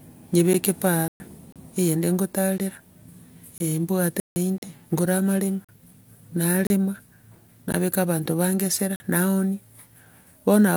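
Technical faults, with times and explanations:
0.53, 1.52–1.56, 2.58–2.60, 3.58–3.60, 4.58–4.62, 5.65–5.69, 6.67–6.70 and 7.72–7.74 s, gap between stream segments: hard-edged holes of roughly 9 to 41 ms, landing about once a second. That's the 1 s segment boundaries not lining up, with the player padding each gap with silence. Nothing's actually lost.
1.08–1.20, 4.20–4.36 and 8.96–9.00 s, block of digital silence: chunks of 120, 160 and 40 ms dropped out to silence, the second right before "ngore amaremo", the last right after "abanto bange esera". They sound like abrupt holes, since nothing fades in or out.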